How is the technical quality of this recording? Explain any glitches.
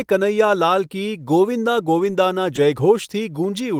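Two brief rough patches show a lost packet rebuilt from error correction. At 1.19 to 1.21 s and 1.99 to 2.09 s, the decoder played low-bitrate backup copies, so there is no gap. The speech turns briefly rougher and noisier. The longer patch fits about three lost packets.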